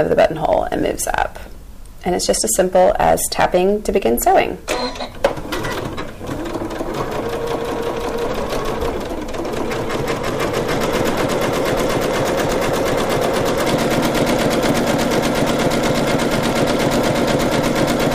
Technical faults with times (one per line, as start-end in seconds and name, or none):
0.00-1.22 hard clipping
2.29-4.71 hard clipping
5.25 hard clipping